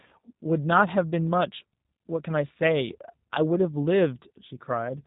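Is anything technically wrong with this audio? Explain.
Yes. Throughout the speech, the G.729 codec's damage is plainly audible. The sound is rebuilt from a vocal tract filter, a pitch predictor and sparse pulses in 10 ms frames, at what sounds like the 8 kbit/s G.729A variant. Nothing above 4 kHz survives, so the speech is muffled, slightly rough and synthetic.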